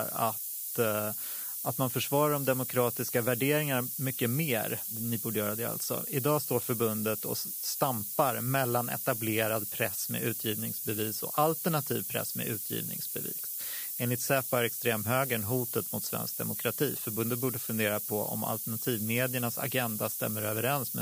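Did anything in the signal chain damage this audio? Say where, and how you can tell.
Yes: sample-format conversion reduced the speech to 5 bits with noise shaping throughout, leaving hiss about as loud as speech; spectrograms show noise rising steeply toward the top band.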